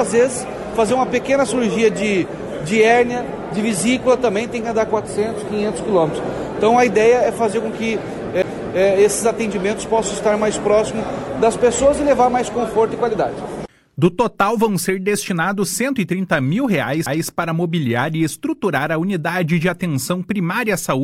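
At 17.06 s there's a CD skip: a tiny tick where the player drops out for a couple of milliseconds, and then the sound carries on from a different spot than where it left off. What's happened is the laser got knocked off its track, maybe by a bump or a flaw on the disc surface, and landed on another turn of the spiral, so the playback position lurches rather than continuing smoothly.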